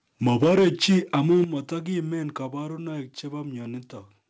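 From 0.26 to 1.42 s the loudest syllables have flattened tops and a harsh, crackling edge, with peaks roughly 6 dB past the ceiling and a noticeable share of samples cut off. This is likely microphone overload at the converter. The distortion rides on the peaks themselves, rather than being a level change.

At 0.44 s and again at 1.44 s, voice and background drop together in a single step, by about 2 dB and then about 8 dB. Each drop follows distorted peaks, which fits the microphone volume being stepped down by the call software. Unlike clipping, this is a clean level change with no added distortion.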